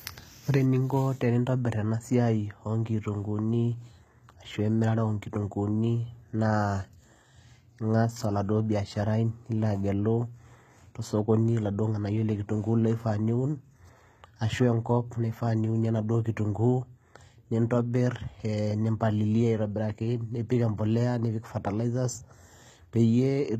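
From start to finish the speech carries plainly audible HE-AAC compression damage. The treble sounds rebuilt rather than real: s sounds come out gritty and lispy, nothing survives above 14.9 kHz, and the character points to a low bitrate, likely around 20 kbps, with spectral band replication filling the top.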